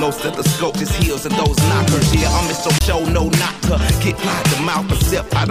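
At 2.79 to 2.81 s there is a CD skip. The laser lost its place and landed on a different turn of the disc's spiral. The player muted for roughly 20 ms while it recovered. That gap is heard as a short tick. Playback then resumes from another point in the audio, so the sound does not carry on where it left off. The join is abrupt.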